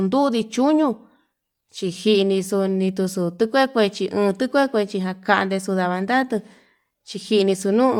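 Throughout the speech, the top end has a breathy, grainy edge. This is likely Bluetooth LC3 compression, the transform codec of LE Audio. It discards much of the upper spectrum and fills the gaps with shaped noise. The damage is plainly audible. The texture fits a rate near 48 kbps with 10 ms frames. The band still reaches about 20.2 kHz, so the harm is grain, not dullness.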